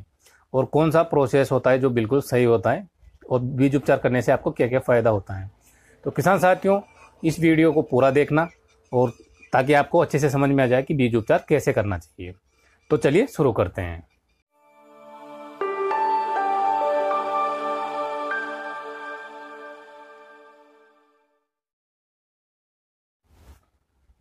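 No technical faults are audible.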